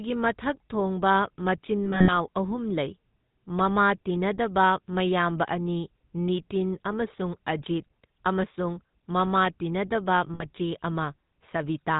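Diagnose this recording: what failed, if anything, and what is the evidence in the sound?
The codec stage failed. The speech is buzzy and gravelly for the whole clip. Nothing is heard above 4 kHz. This is the GSM full-rate codec, and the sound fits its 13 kbps coder. It models the vocal tract and drives it with sparse, regularly spaced pulses, so fine detail is lost.

The transmission stage dropped GSM frames in two places. From 1.84 to 2.12 s the sound rings metallically in scattered bursts. About 140 ms is missing, and the longest gap runs roughly 70 ms. A shorter ring follows from 10.34 to 10.46 s. Each gap replays the last good frame's settings.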